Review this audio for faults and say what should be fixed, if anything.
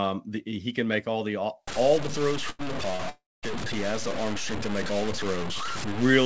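From 1.67 s to the end, the sound turns grainy and gritty, with a rough distortion that follows its level and is only about 10 dB below the signal. This is low bit depth without dither, likely from truncation to something like 5 bits. Prevent it by keeping at least 16 bits and adding dither before any word-length reduction.

At 2.50 to 2.61 s and again at 2.96 to 3.01 s, the sound hangs unnaturally, held for about 90 ms and then 33 ms before carrying on. These are short stalls from a late packet: the jitter buffer ran dry, so the receiver stretched the last sound until the packet came. Prevent them with a larger or more adaptive jitter buffer on the receiving side.

From 3.09 to 3.45 s, a call audio freeze holds the sound as a fading buzz that drops into about 210 ms of silence, adding roughly a third of a second before the audio resumes where it stopped. The likely cause is packets held up in transit, emptying the jitter buffer. 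Prevent it by fixing the network path's delay spikes and giving the jitter buffer enough headroom. The call path's cut-off at 8 kHz matches G.722 and is not a fault.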